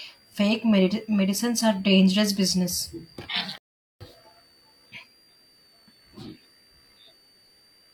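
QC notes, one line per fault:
Throughout: switching supply whistle. A thin, high whistle sits under the speech for the whole clip, wandering in pitch between about 4.51 and 4.79 kHz, roughly 35 dB below the speech. It comes from a switching power supply whose regulation has dropped into an audible burst mode, or which is beating against a second supply. As the load shifts, the switching rate moves, so the tone drifts within that band instead of holding one pitch.
3.58–4.01 s: rebuffering stall. The speech cuts abruptly to silence for about 0.43 s, then picks up exactly where it broke off, with nothing missing and nothing repeated. The player used up its downloaded audio and had to halt until more data arrived before it could continue. Because playback just pauses and resumes at the same point, no sound is lost, but the gap adds that dead time to the running length.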